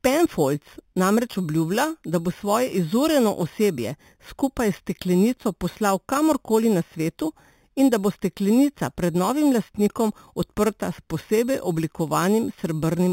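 From start to finish, the speech carries imaging from sample-and-hold upsampling. The sound points to a low original rate near 8 kHz, raised by simply repeating samples with no smoothing filter. Mirrored copies of the spectrum therefore sit above the real band, the first spanning 4 to 8 kHz at about 19 dB below the speech, heard as a bright metallic fizz. Unlike steady hiss, it rises and falls with the speech. Its pitch also moves against the voice's, which marks it as a mirror image.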